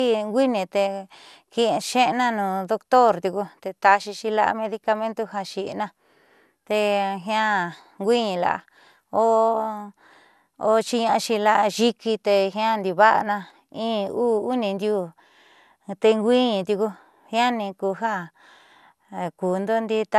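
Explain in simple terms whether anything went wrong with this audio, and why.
Generation loss runs through the whole speech clip. It sounds swirly, hollow and blurred, worse than one encoding would, likely from being re-compressed about seven times.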